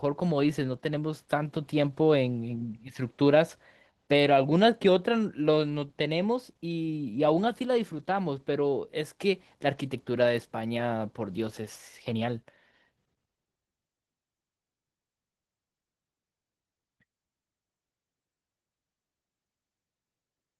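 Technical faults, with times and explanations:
Throughout, Opus voice compression: the speech is hoarse and slightly robotic. The highs are grainy rather than cut off, which fits hybrid coding at about 16 kbps, with linear prediction below 8 kHz and a coarse CELT layer above it.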